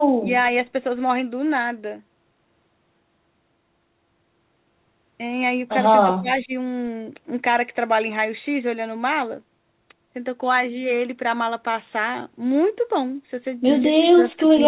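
Speech suppressed in double talk, likely from an echo canceller ducking during crosstalk, dips the level at 0.18–0.29 s (about 15 dB), 6.03–6.53 s (about 25 dB), and 13.93 s to the end (about 35 dB). These dips all fall within a narrowband path with nothing above 4 kHz.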